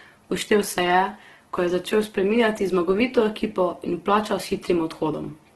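The whole clip carries the same damage: the speech sounds grainy and rough, with a noisy, sandy texture on the tones and nothing above 12.3 kHz. That's likely Opus compression in its music mode, filling starved bands with noise, and it points to a very low bitrate of around 12 kbps.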